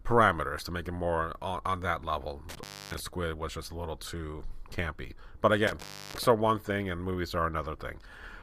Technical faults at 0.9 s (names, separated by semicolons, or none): none